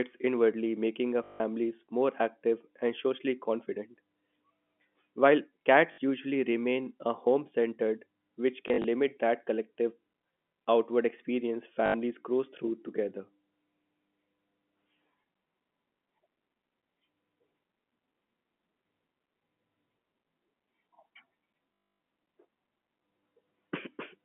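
At 1.24–1.4 s, 5.92–5.98 s, 8.68–8.84 s, 11.86–11.94 s and 21.74–22.0 s the telephone-band speech breaks into packet loss with the last packet repeated. Audio went missing and the receiver kept replaying the previous chunk, which fits 20 ms packets. The loops buzz at about 50 Hz, including the 260 ms run near 22 s. The 8.7 s event is broken into short bursts. Unlike silent dropouts, nothing goes quiet. The sound stutters robotically instead.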